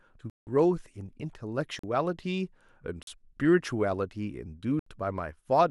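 Four blocks of digital silence cut into the speech: 0.30–0.47 s (about 170 ms), 1.79 s and 3.03 s (about 43 ms each), and 4.79–4.86 s (about 71 ms). The sound cuts out with no fade, so each gap sounds like a short hole. On the waveform it appears as a flat line, and on the spectrogram as a blank vertical band. The 43 ms and 170 ms lengths fit 2048- and 8192-sample buffers going unfilled.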